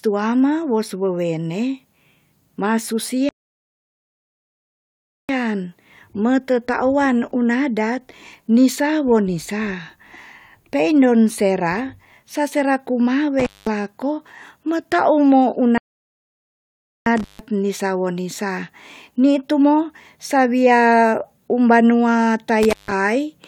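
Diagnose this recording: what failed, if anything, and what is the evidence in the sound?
At the playback stage, the speech drops to silence for 2 s at 3.29–5.29 s and for about 1.28 s at 15.78–17.06 s. It then resumes. The cause is likely a playback stall, with the player starved of data or blocked. On a waveform these show as flat-line gaps; a spectrogram shows blank columns.

At the analogue wiring stage, brief cut-outs at 13.39 s (about 0.2 s), 17.17 s and 22.63 s (about 0.15 s each) carry crackle at both edges and faint hiss between. This is an intermittent contact, a loose plug momentarily opening. Spectrograms show broadband vertical clicks bracketing low-level noise.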